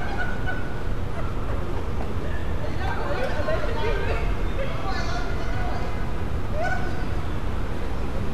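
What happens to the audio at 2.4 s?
At 2.40 to 2.43 s there's a repeated-frames stutter: a 24 ms chunk plays twice, pointing to one duplicated compressed frame. It adds 24 ms.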